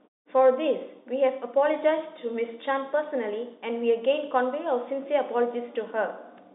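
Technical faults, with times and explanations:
No faults turn up here: the G.711 telephone coding keeps everything under roughly 3.8 kHz as a phone line should, and the muted pauses just let the background drop away between phrases before the speech comes back on time.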